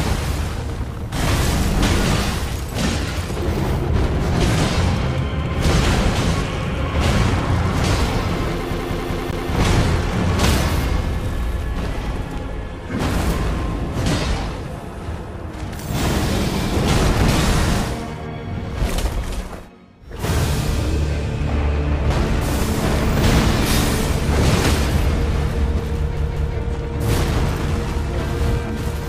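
CD stuck on one turn, from 8.73 to 9.51 s and again from 26.17 to 26.56 s: a scratch keeps sending the laser back one track, so the same 195 ms slice of audio repeats, four times then twice, each jump marked by a brief mute, producing a fast, even stutter.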